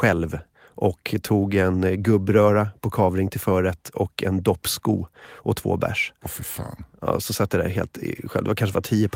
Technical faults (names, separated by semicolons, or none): lost packet rebuilt from error correction